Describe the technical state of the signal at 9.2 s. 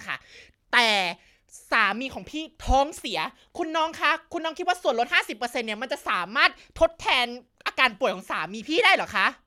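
At 9.2 s the speech signal is intact, with no audible fault at that moment.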